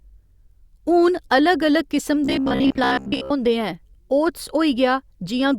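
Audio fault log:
2.25–3.32 s, robotic sound from repeated short buffers: after "हून अलग अलग किस्म" the speech becomes a rigid metallic buzz at about 66.8 Hz for most of the stretch, likely from a roughly 15 ms chunk being replayed while real audio is skipped; unlike stutter or dropouts, it gives a fixed pitch instead of gaps or repeated syllables.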